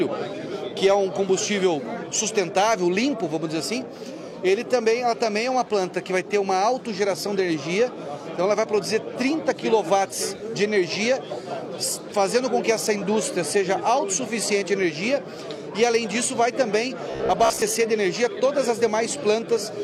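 The audio turns into a robotic buzz from repeated short buffers between 17.11 and 17.62 s, locked to about 67 Hz, which points to a roughly 15 ms buffer. Unlike a stutter, where whole chunks audibly restart, this likely comes from late audio being padded by looping the last buffer, with around two fifths of the sound repeated.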